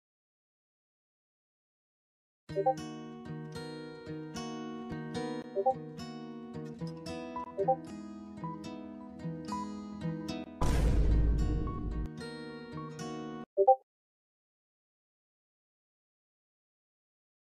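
A recorder or processor working in roughly 3-second chunks likely drops a sliver of audio, about 20 ms, at each handover. This audio missing between chunks is heard as brief, evenly spaced skips at 4.92, 7.90 and 10.88 seconds, where the sound jumps abruptly forward.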